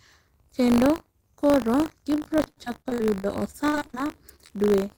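From the start to the end of the speech runs a steady buzz at 50 Hz, the mark of buffer tearing. The program filling the playback ring buffer and the hardware reading it have drifted out of step, so in each period a small sliver of samples is stale audio from around 40 ms earlier, joined on both sides by hard edges. A 50 Hz repeat fits a 20 ms period. Unlike mains hum at the same frequency, the rattle rides only on the speech and drops away in pauses.

From 2.15 s to 4.68 s, repeated packet loss gives the speech a choppy, robotic quality. Over this stretch 27 separate holes appear, the longest 66 ms. Each is first patched by stretching the last sound, which covers 645 ms in all, about a quarter of the span, and a further 540 ms is simply missing. Where the tearing is an even, periodic buzz, this damage is irregular, with smears and dropouts that stop once the stretch ends.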